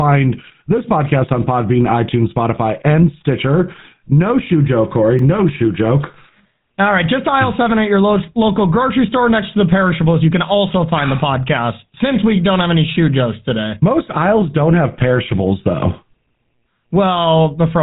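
From start to end, the speech carries GSM full-rate codec damage. The codec drives a model of the vocal tract with sparse pulse excitation. That leaves a plain buzzy, gravelly roughness. Nothing passes above 3.8 kHz, so the sound is narrow and dull. The damage fits the 13 kbps full-rate coder.

At 5.19 s there is a block of digital silence. It lasts only about 1.3 ms, which fits a 64-sample block. The output was most likely briefly not filled, so the sound dropped to silence with no fade. It is heard as a tick or dip.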